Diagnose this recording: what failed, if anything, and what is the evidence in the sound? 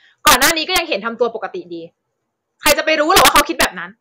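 Violent, harsh cracks break out on the loud parts of the speech from 0.27 to 0.78 s, 2.66 to 2.72 s and 3.17 to 3.65 s. This is integer overflow in a gain or sample-format conversion stage: peaks pushed about 6 dB past full scale wrapped to the opposite sign instead of being limited.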